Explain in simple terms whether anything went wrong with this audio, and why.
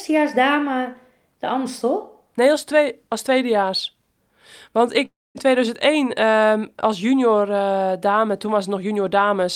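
At 5.05 s the speech turns into a fading buzz, then goes silent until 5.37 s, likely a long network dropout. Unlike a brief glitch, the missing speech never returns.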